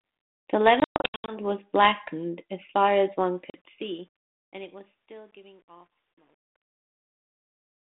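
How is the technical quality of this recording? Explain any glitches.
Two kinds of fault break up the recording, which sounds like a narrowband telephone line. Its light coding hiss and roughly 200 Hz to 3.6 kHz band fit 32 kbit/s G.726 ADPCM.

Between 0.8 and 1.38 s, the speech drops into abrupt silent holes and comes back slightly distorted. This is packet loss on an ADPCM call. About 360 ms goes missing across 480 ms, in runs of up to 120 ms, which points to around twenty lost packets. With each loss, the decoder's predictor and step size drift from the sender's, so the speech restarts slightly distorted until the two resynchronise. A shorter 40 ms hole, about two packets' worth, appears from 3.5 to 3.59 s.

From 3.27 s, the fade-out turns gritty, worst from 4.49 s to the end at 7.9 s. This is truncation distortion on a fade. The fade stage keeps only 10 bits and adds no dither, so as the level sinks the waveform collapses into a few coarse square steps.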